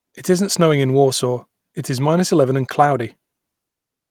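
Speech recording; no technical faults detected.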